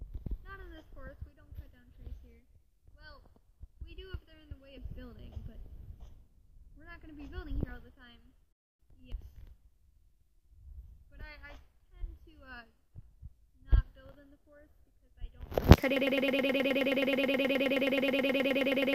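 Playback likely stalled at 15.96 s and resent its last 106 ms: a broken-record loop repeating 28 times to the end, losing the intended audio.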